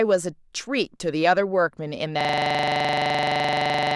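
System hang loop from 2.21 s to the end: the system froze while the audio hardware kept replaying one 42.67 ms slice of its buffer, which fits a 1024-sample buffer, about forty times over, producing a rough, rapid stutter repeating at 23.4 Hz.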